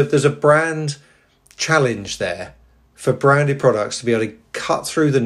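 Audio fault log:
3.61 s, repeated buffer: fresh audio failed to reach the output device in time, so it played its last buffer a second time. That piece is only about 5.8 ms long, which fits a 256-sample buffer, so the doubling comes across as a short click or brief buzz in the speech rather than an audible stutter. There is a hard join where the repeat starts, and a few milliseconds of audio are skipped after it.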